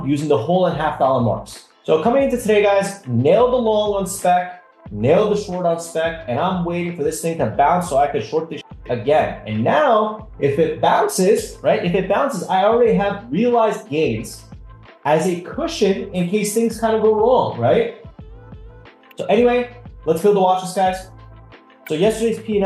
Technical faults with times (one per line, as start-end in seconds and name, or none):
none